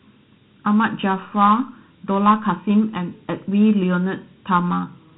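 Speech, and it's hollow and phasey from start to finish: that's channel delay (comb filtering). One channel trails the other by under a millisecond, so summing to mono carves evenly spaced notches, the first around 700 Hz and repeating up the band. It's also plainly Dialogic VOX ADPCM, the 4-bit OKI flavour. Nothing gets above 3.9 kHz, which fits 8 kHz sampling at 32 kbps, and a gritty hiss rides along under the speech the whole way through.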